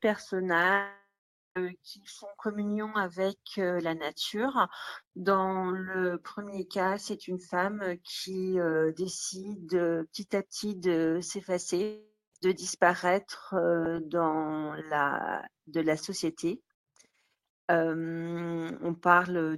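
The audio breaks up twice. From 0.73 s to 1.57 s it stops. The last sound is stretched into a fading buzz, then about 0.48 s of silence follows. It resumes with roughly 0.82 s of material gone. From 11.83 s to 12.34 s the same happens, with about 0.5 s lost and 0.2 s of silence. The likely cause is a long network dropout, where the receiver concealed missing packets briefly before giving up.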